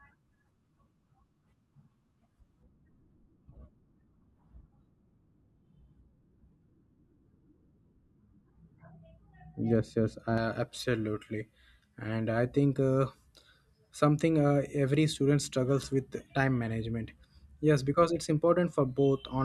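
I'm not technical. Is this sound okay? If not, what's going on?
No. From 2.63 to 10.38 s, de-emphasis was applied wrongly: a treble cut landed on speech that didn't need it, so the voice turns dull and muffled.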